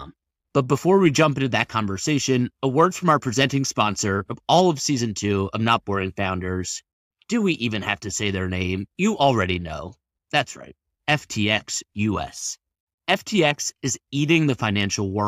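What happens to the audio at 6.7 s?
Nothing goes wrong at 6.7 s: the speech continues intact through that moment, with no dropout, click, distortion or other fault.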